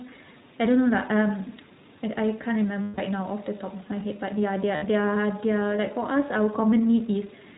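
iLBC codec damage runs through the whole speech clip: everything above 4 kHz is gone, and the sound is plainly rough and slightly synthetic, consistent with the 15.2 kbps mode coding each 20 ms frame independently. Lost iLBC frames appear at 2.82–3.00 s (160 ms, which fits eight frames) and at 4.76–4.84 s (60 ms). In each gap the decoder fills in by repeating the last pitch cycle mixed with noise, so it sounds like a held, buzzy vowel. The voice is right again almost at once. An echo leak appears at 3.79–3.84 s as a very faint copy of the speech about 166 ms late. The likely cause is a loudspeaker at the far end whose echo canceller let part of the microphone pickup through and sent it back.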